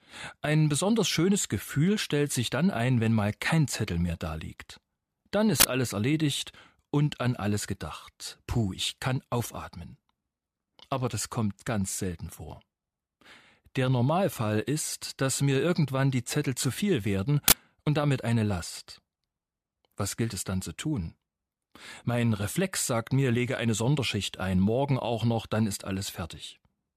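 Uninitialised buffer faults interrupt the speech at 5.60 s and again at 17.48 s, each lasting 40 ms. In both places a block of output was sent to playback before any audio had been written into it, so whatever stale data sat in that memory was played as though it were samples. The result is a short, loud burst of harsh digital noise, and its length fits a 40 ms buffer block.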